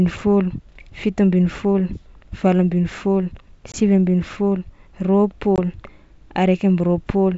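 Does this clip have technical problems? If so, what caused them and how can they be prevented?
Yes. Packet loss on an ADPCM call leaves two single-packet holes, at 3.72–3.75 s and 5.56–5.59 s. Each is a 20 ms silence that shows as a flat gap in the waveform and a sharp vertical blank band on a spectrogram. The speech returns slightly distorted while the decoder's predictor resynchronises with the sender. Packet loss concealment, a jitter buffer and resetting the predictor state after a lost packet would prevent it.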